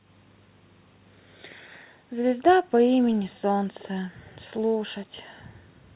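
From 3.79 to 3.85 s a brief, faint echo leak surfaces: a delayed copy of the speech arriving about 364 ms after the original and sitting well below it. The likely cause is a far-end loudspeaker whose echo canceller let a scrap of its microphone pickup slip back into the call. That long, fixed delay sets it apart from room reverberation, which trails directly off the sound, and from a repeated packet, which would replay at full level rather than this quiet residue.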